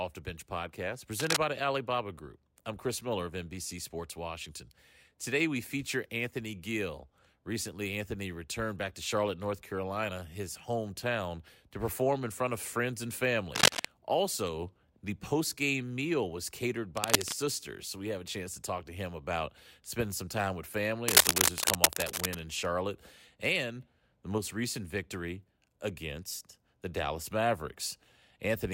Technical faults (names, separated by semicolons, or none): cable scratch noise